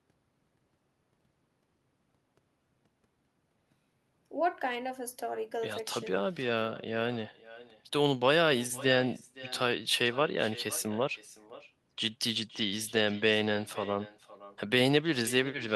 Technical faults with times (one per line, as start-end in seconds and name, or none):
0.00-15.75 echo with no canceller